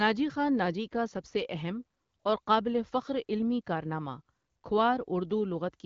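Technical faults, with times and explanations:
Nothing here needs flagging: this speech comes through AMR wideband (HD Voice) at 12.65 kbit/s, and there isn't a single technical fault to point to.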